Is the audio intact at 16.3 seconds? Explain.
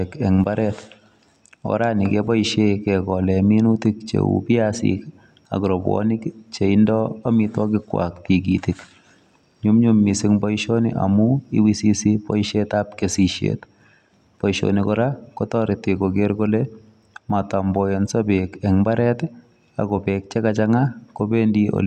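Yes, at 16.3 seconds the speech plays through intact, with no dropout, click, distortion or other fault at that moment.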